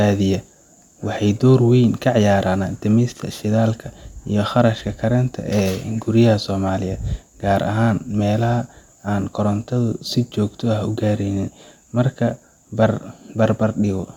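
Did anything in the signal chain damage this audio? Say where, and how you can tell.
No, no stage from capture through to playback leaves any audible damage on this speech. Nothing heard at any point ties a problem to a particular link in the chain.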